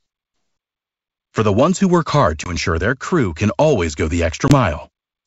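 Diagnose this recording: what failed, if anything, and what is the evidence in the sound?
The network stage shows packet loss on an ADPCM call over what sounds like a wideband G.722 link. At 2.44 to 2.56 s and 4.48 to 4.53 s, the speech drops into a hard-edged 20 ms hole, about one packet, then returns with brief, slight distortion. On a waveform, each hole is a flat gap. On a spectrogram, it is a vertical blank band. The decoder's predictor and step size lost track of the sender's and needed some tens of milliseconds to resynchronise.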